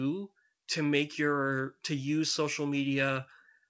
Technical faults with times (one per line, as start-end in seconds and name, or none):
none